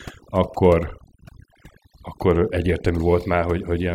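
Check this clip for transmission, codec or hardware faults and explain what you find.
One fault runs through the whole speech clip: overdone noise removal, present from start to finish. A noise reduction stage was pushed too hard, so any frequency band that comes close to its noise estimate is pulled sharply down or gated off entirely. The weaker parts of the speech fall into that range and are stripped away too. Between phrases the background collapses to near silence scattered with twinkling specks.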